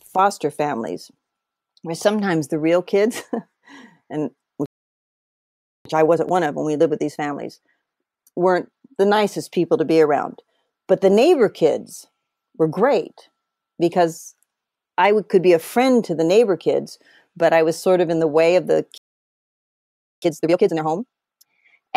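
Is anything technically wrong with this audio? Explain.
Yes, the speech has two playback stalls, each followed by time-compressed catch-up.

The playback stalls go silent mid-flow from 4.66 to 5.85 s and from 18.98 to 20.22 s, right after "the way of the". Each lasts about 1.2 s. The likely cause is the player running dry of data or its thread getting blocked.

The time-compressed catch-up follows each stall, with the player trimming and cross-fading small chunks to clear its backlog. From 5.85 to 8.85 s, beginning with "the nicest people to", it runs at 1.15x. From 20.22 to 21.46 s it runs at 2x. Both sound hurried at normal pitch.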